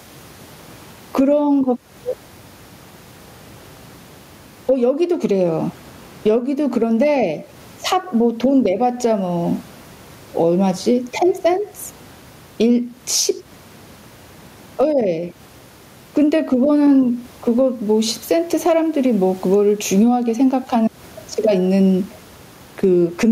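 Speech with gain pumping all the way through: the gain swings by around 15 dB as the talking comes and goes, with the room noise sitting about 42 dB under the speech. The likely cause is input gain set far too hot and a fast limiter clamping down on each loud syllable.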